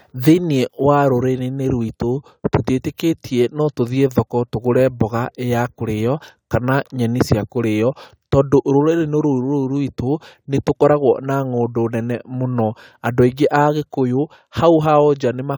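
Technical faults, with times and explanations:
No technical faults can be heard in the speech, and the signal runs continuously without any audible disruption.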